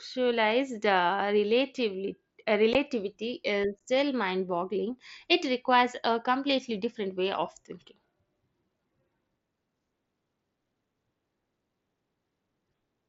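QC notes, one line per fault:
2.73 s and 3.80 s, unconcealed Bluetooth headset packet loss: each gap silences the speech for about 15 ms, consistent with two consecutive headset packets dropping between headset and phone with nothing filling the hole, leaving short holes with abrupt edges in the light grain of the mSBC link.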